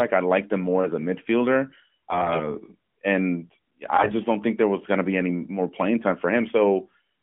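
Just after "more as a midfielder", from 2.10 to 2.55 s, AMR bit errors turn the narrowband phone-line speech hoarse and gargly. Pitch and level hold, but the pulse positions and finer spectral values arrive corrupted. A second, harsher burst from 3.96 to 4.13 s precedes "don't think there was". On a spectrogram the harmonics below 3.4 kHz smear into scratchy noise; the waveform envelope stays intact while its fine structure looks ragged.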